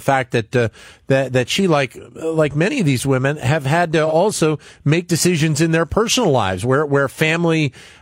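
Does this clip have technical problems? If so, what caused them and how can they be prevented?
Yes. AAC frame loss with concealment at 4.06 to 4.13 s: a gap of about 43 ms, consistent with one lost frame, was patched by the decoder reusing the last good spectrum, leaving a brief smeared, noisy blur in the speech. Protecting the stream with forward error correction or retransmission on a lossy link prevents it.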